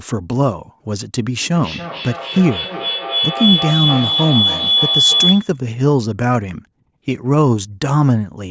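From 1.54 s to 5.64 s a piercing tone near 3 kHz swells until it is about as loud as the speech, with the loop repeating roughly every third of a second. This is feedback howl: two devices in one room feed each other, and each pass through the loop comes back louder.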